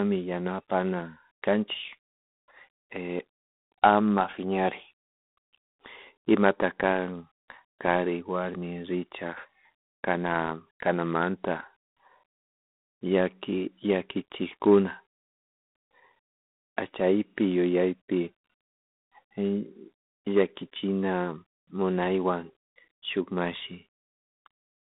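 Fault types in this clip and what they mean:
G.726 ADPCM: telephone-band speech coded as small differences from an adaptive prediction, with a harsh, rasping hiss that rises and falls with the voice level, which fits the 24 kbit/s rate. Nothing passes above 3.8 kHz. Unlike steady background noise, the hiss vanishes in pauses.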